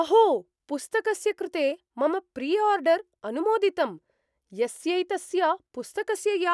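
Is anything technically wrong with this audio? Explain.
No, nothing in this speech recording stood out as a technical problem on listening.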